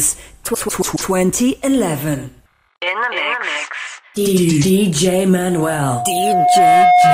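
Loudspeaker feedback squeal from 5.34 s to the end: a 719 Hz tone swells over about one and a half seconds to roughly 10 dB above the audio.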